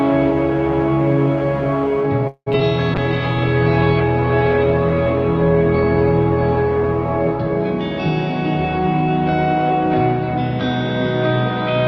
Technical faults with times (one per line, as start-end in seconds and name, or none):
2.27-2.48 call audio freeze
2.52-2.62 short concealed packet loss
2.95-7.74 call bitrate drop